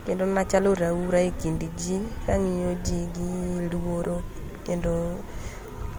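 Transcoding between lossy codecs runs through the whole speech clip. The speech carries two layers of compression damage at once, with nothing above 20 kHz. The character points to an MP3 stage at around 64 kbit/s followed by Opus at around 48 kbit/s. The second encoder spends its limited bits re-encoding the first one's artefacts, then adds its own artefacts, so the mixed textures sit together on every phrase. This is likely the cause.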